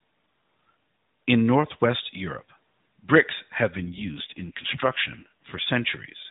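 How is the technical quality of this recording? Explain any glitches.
The speech has the narrow band of a mobile call, with nothing above 4 kHz, and contains one glitch. From 3.78 to 5.63 s, right after "bricks have", there is an AMR rate drop. The voice turns rougher and more synthetic, in a way that fits the codec falling from 12.2 to 5.9 kbps. The network likely moved bits to error protection. The bandwidth stays the same and there is no gap.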